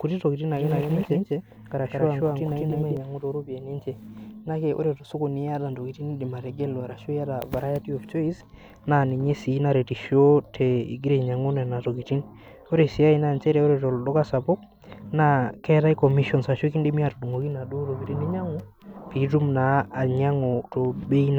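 A slower second capture path likely fed this speech in twice: from 0.57 to 2.97 s, a doubled audio track adds an equally loud copy trailing about 200 ms behind.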